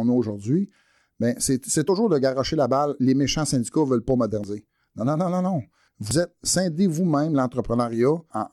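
Compressed frames were skipped at 4.34 s and again at 6.11 s, after "non non non non". Each time about a tenth of a second of speech drops out and the audio jumps ahead.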